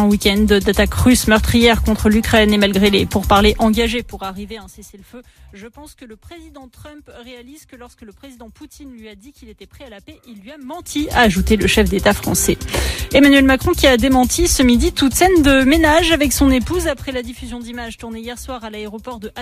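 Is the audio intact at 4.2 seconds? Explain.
No. From 3.55 to 4.92 s a level reduction of roughly 25 dB is applied in coarse steps with no smoothing between them. It advances at roughly forty jumps a second instead of gliding, which is classic zipper noise. Each abrupt jump puts a small discontinuity into the waveform, so at 4.2 s the fading sound carries a rapid ticking, zipping texture that rides on top of it for as long as the level keeps moving.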